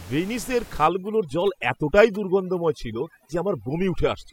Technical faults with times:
0.87-4.33 overdone noise removal

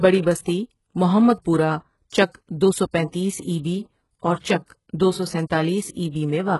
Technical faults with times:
0.00-6.60 HE-AAC compression

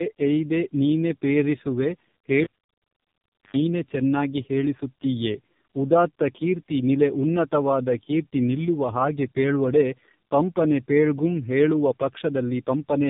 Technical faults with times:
0.00-13.10 tandem speech coding

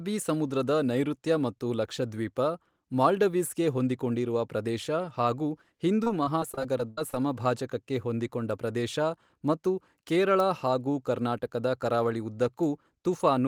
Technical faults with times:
6.03-7.14 repeated packet loss (robotic sound)

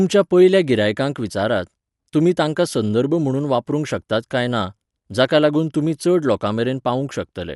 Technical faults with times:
0.00-7.55 Dolby Digital compression

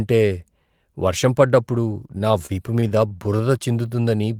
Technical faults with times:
2.11-3.78 repeated stalls (stutter)
3.89-4.17 jitter buffer slow-down

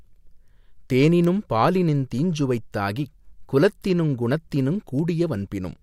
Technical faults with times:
0.50-5.74 word clock ticks

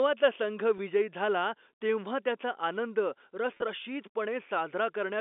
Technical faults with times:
0.78 packet loss with pitch repetition
3.54-3.62 packet loss with pitch repetition

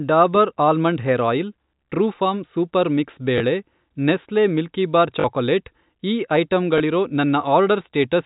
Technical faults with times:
3.38-3.40 packet loss with last packet repeated
5.20-5.24 packet loss with last packet repeated
6.78 packet loss with last packet repeated

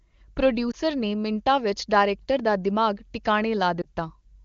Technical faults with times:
0.71-0.76 lost AMR speech frames
3.82-3.85 lost AMR speech frames

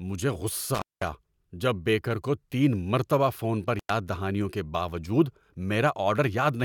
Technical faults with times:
0.74-1.08 intermittent contact
3.78-3.90 intermittent contact

